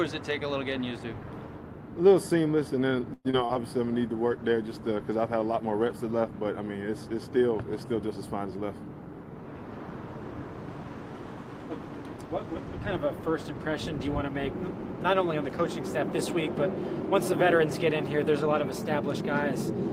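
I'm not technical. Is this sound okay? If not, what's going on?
No. There are three separate problems.

From 3.13 to 3.57 s there is repeated packet loss (robotic sound). Four chunks of audio failed to arrive, the longest lasting about 0.11 s. Each hole was filled by stretching the previous sound, so nearly half of that stretch is patched and sounds choppy.

From 3.82 to 6.45 s there is a call bitrate drop. The connection briefly had less capacity, so the audio was squeezed into far less data for over two seconds. During that stretch the sound becomes coarser and duller before it clears up again.

From 14.92 to 15.72 s there is a jitter buffer speed-up. Delayed audio had piled up at the receiving end, so tiny slices totalling roughly 40 ms were cut out to catch up. The sound runs about 4% faster at the same pitch.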